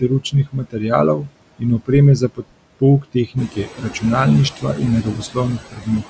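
Noise suppressor artifacts run through the whole clip: the suppressor attenuates every band it judges to be steady noise, frame by frame. The residual background pumps between and under the speech with a fluttering, watery texture, most noticeably once the room noise rises by about 24 dB near 3.5 s.

Speech cut by the noise suppressor appears at 0.0–0.84 s, 1.17–1.63 s, 1.79–1.9 s, 2.17–2.82 s, 3.01–4.04 s, 4.5–4.81 s, 5.03–5.37 s and 5.58–6.1 s. Speech mistaken for noise drops by about 16 to 22 dB, so soft consonants and word endings sound swallowed.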